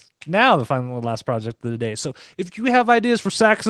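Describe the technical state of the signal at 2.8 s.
At 2.81 s there's one sharp click, a thin vertical line through the spectrum. That's dropped samples, likely just a single sample missing, so the waveform jumps straight to a later value. It's far too short to take out any actual sound.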